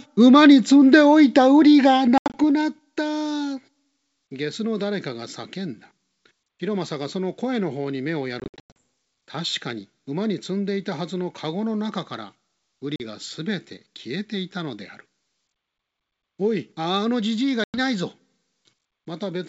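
Speech clip carried over G.722 wideband telephone coding, clean up to about 7 kHz in a way that fits 64 kbit/s, with packet loss on an ADPCM call at 2.18–2.37 s, 8.40–8.77 s, 12.96–13.01 s and 17.64–17.78 s. Lost packets become hard-edged silent gaps, from 40 ms up to 260 ms in total, scattered in the first two events. After each gap the decoder's adaptive predictor and step size no longer match the sender's, so the audio returns distorted until they resynchronise.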